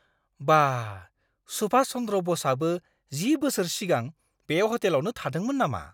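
No technical faults can be heard anywhere in the recording.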